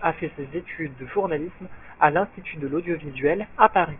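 Listening to the speech in this clip, nothing stood out as a technical problem.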